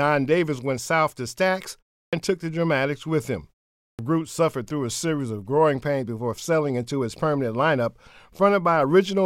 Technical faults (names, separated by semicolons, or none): clipped start after a pause